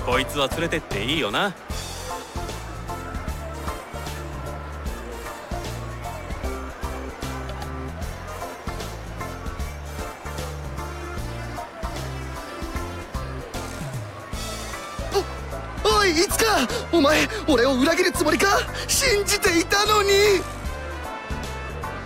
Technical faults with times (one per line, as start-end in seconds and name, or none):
0.00-15.44 crude rate conversion